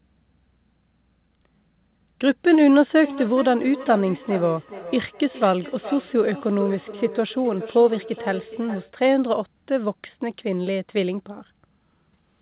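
From 2.96 to 8.95 s there is feedback echo between two devices. A second device in the room replays the far end, and its microphone sends it back. The speech returns roughly every 0.4 s, thinner and ringing, peaking about 15 dB below the speech, all within the narrow band that ends at 4 kHz.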